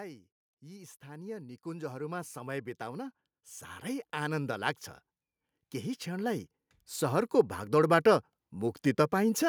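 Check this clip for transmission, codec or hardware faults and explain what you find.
Automatic gain rising occurs twice in this speech clip: from 0.6 to 3.1 s, raising level by about 10 dB, and from 6.04 to 8.07 s, by about 6 dB. The gain control judged the input too quiet and ramped up gradually, so voice and background noise swell together.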